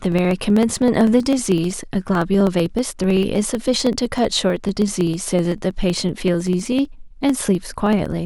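Speech, carrying periodic USB or driver dropouts from 0.06 s to 8.18 s. Every 63.5 ms, roughly 16 times a second, a tiny slice of audio, around half a millisecond, is skipped outright rather than replaced with silence. The splice at each gap produces a tick, so the speech carries a steady stream of clicks, well over a hundred in total, audible only where there is signal. The fixed spacing points to a background task periodically stalling the USB bus or audio driver.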